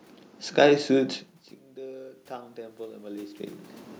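Automatic gain rising runs from 1.76 to 3.4 s in this speech clip. The level reaching the microphone has dropped by about 24 dB, and the automatic gain control responds by slowly raising its gain by about 6 dB. Because it acts on the whole signal, the voice and the room noise swell together over more than a second. The level shifts near 1 s and 3.5 s, by contrast, come from the talker moving relative to the microphone.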